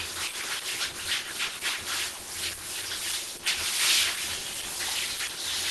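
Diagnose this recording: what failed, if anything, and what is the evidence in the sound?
Throughout the clip the sound is hoarse, muffled and grainy, with a rough noisy texture where smooth detail should be, and nothing at all above 12.1 kHz. This points to the codec stage, likely Opus compression running at a low rate, around 16 kbps. At that rate the encoder falls back to its hybrid mode and a super-wideband ceiling, so it discards the top band outright and fills thin bands with approximated noise. That produces the plainly audible graininess.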